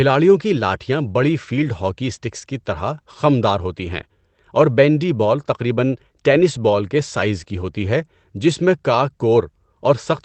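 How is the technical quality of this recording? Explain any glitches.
The speech passes through a call codec with a top end that stops at about 8 kHz, with its usual coding noise, and there is one brief glitch.

At 6.35 to 6.41 s, between "بال تقریباً" and "بال کے سائز کی", about 40 ms turns rough and noisier, with no gap. This is a lost packet rebuilt from error correction: lost audio, likely two 20 ms packets, was replaced by the lower-quality backup copy carried in the following packets.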